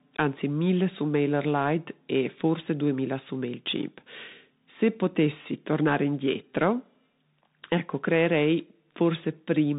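From start to end, the speech carries plainly audible Bluetooth CVSD headset codec damage. The one-bit delta coder's adaptive step can't keep up with loud high content, so sibilants scratch over a granular hiss. A spectrogram shows a hard ceiling near 4 kHz, and the waveform looks grainy.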